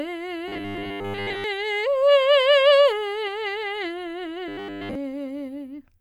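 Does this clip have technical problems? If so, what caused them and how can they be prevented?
Yes. Audio likely arrived too seldom, so 10 ms buffers were repeated: robotic sound from repeated short buffers, a rigid 100 Hz buzz from 0.48 to 1.44 s (mostly replaced) and 4.48 to 4.95 s (wholly replaced). A larger buffer or a more reliable audio path prevents it.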